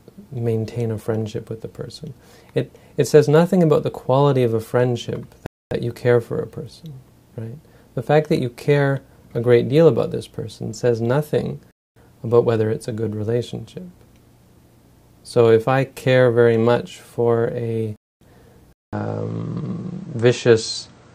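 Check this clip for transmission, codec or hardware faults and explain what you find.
Two faults are present. 250 ms holes at 5.46, 11.71 and 17.96 s mark a gap between chunks: the audio arrives in 6-second pieces with silence inserted at each join.

From 18.73 s, after a 200 ms silence, the sound turns duller, with nothing above 8.6 kHz, about 5 dB level shift and new noise, likely input switched to a poorer device.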